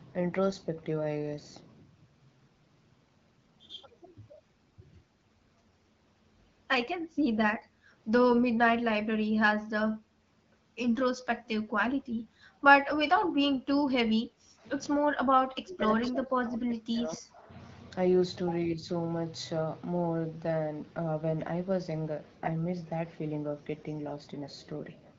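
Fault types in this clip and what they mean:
Speech suppressed in double talk: With both sides likely talking at once, the echo canceller seems to have mistaken the talker for loudspeaker echo and turned it down. The speech dips by up to about 20 dB at 14.32–14.65 s and 15.0–17.56 s, and more mildly, about 5 dB, at 18.66–18.87 s.
Echo leak: The far end's echo canceller likely failed to remove everything its microphone picked up from the loudspeaker, so some was sent back. A brief delayed copy of the speech, about 197 ms late and about 15 dB below it, appears at 16.02–16.09 s.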